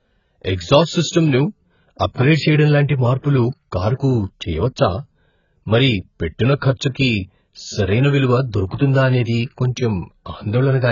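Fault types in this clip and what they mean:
AAC compression: the speech sounds dull and smeared, with a warbly fizz and nothing above 7 kHz, likely from an AAC-LC encode squeezed to around 12 kbps.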